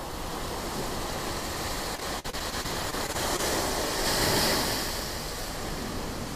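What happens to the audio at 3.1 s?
At 3.1 s the audio is inside a stretch of repeated packet loss (robotic sound) running from 1.95 to 3.41 s. Eleven short dropouts, the longest 48 ms, are patched by extending the preceding sound, leaving a choppy texture with pieces missing.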